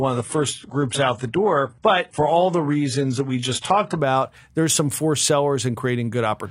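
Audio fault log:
0.0–4.0 s, adaptive stream starting at a low bitrate: the speech opens dull and smeared, with nothing above 11.1 kHz and the top end sounding synthetic rather than natural, which fits a very low-bitrate HE-AAC rendition chosen so playback could begin quickly. At 4.0 s, just before "there's some forced", the player has measured the connection and switches to a higher rendition, consistent with roughly 96 kbit/s AAC-LC, so clarity jumps abruptly with no gap in the audio.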